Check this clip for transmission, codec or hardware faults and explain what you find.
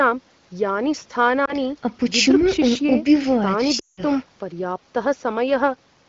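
Two transmission faults are present, both lost AMR speech frames, heard through the AMR-WB (HD Voice) path. At 1.45–1.55 s a single brief dip marks one lost frame. At 3.79–4.03 s, a gap that fits roughly nine lost frames, the decoder repeats the last good pitch and vocal tract settings at falling gain, so the sound drops to near silence within two frames before speech recovers.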